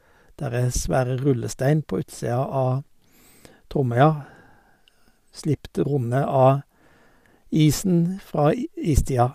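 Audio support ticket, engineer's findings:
Engineer's findings: no fault found in this audio.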